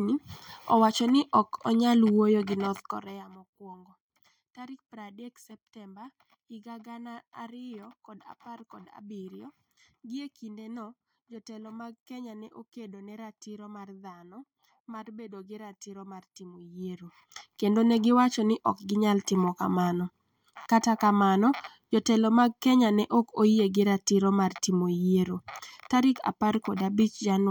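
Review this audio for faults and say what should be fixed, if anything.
Nothing here needs fixing; I listened through this speech clip and didn't catch any faults worth flagging.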